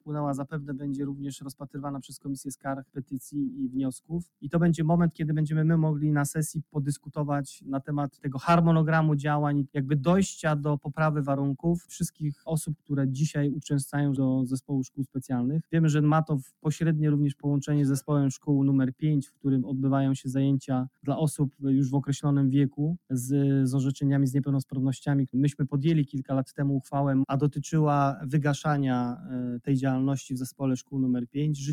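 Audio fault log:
throughout: noise suppressor applied to music or sounds. The level pumps and thins, swinging by around 10 dB, because a speech-oriented suppressor treats sustained tones and ambience as noise.
0.01–5.22 s, 6.57–8.35 s, 9.64–9.84 s, 10.79–12.92 s, 14.61–19.46 s, 20.86–21.64 s, 22.70–23.12 s, 24.70–31.69 s: sound cut by the noise suppressor. Held and decaying sound sinks by up to about 16 dB (about 17 dB at 22.7 s) as the suppressor pulls it down.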